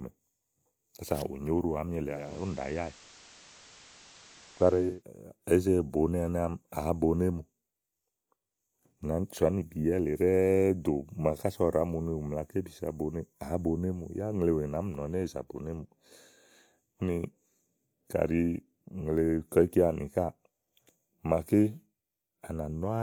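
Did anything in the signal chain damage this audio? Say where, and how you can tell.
Yes. The damage happens at reception, in a hybrid radio receiver. From 2.04 to 5.04 s the sound shows digital radio blending to analogue FM. A 0.4 s crossfade brings in hiss, around 25 dB below the signal. The level stays steady.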